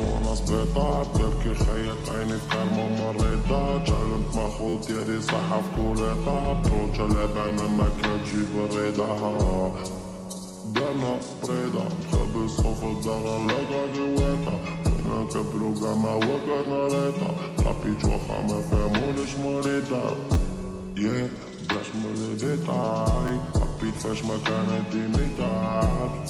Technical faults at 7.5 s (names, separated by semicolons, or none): repeated buffer